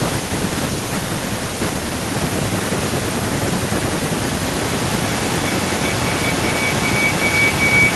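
From 4.46 s to the end, a piercing tone near 2 kHz swells until it sits about 5 dB above the speech, pulsing roughly every 0.4 s. This is feedback howl: microphone-to-loudspeaker pickup between two devices on the call amplifies each pass around that loop.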